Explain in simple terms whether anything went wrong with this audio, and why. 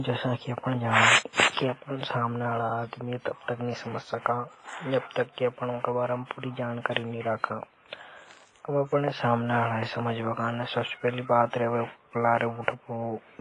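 Yes, a couple of things went wrong. The whole recording has a watery, ringing quality with a hiss that swells and fades along with the talking, and everything above about 10.5 kHz is simply gone, so it sounds dull and a bit underwater. That's the signature of heavy WMA compression, likely squeezed hard to save space: the codec throws away quiet detail and smears its leftover noise around each sound.

There's also a pre-echo from about 6.94 to 6.96 s, right after "ऊका बारा में पूरी". You get a short burst of hiss for roughly 26 ms just before a sharp attack, so the attack arrives softened and blurry instead of crisp. That happens because the codec spreads its noise across a whole chunk of time, and the quiet moment before the loud hit ends up carrying some of it.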